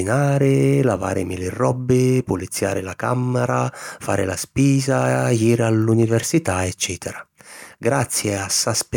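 No technical faults can be heard anywhere in the recording. Nothing in the signal draws attention at any point during the speech.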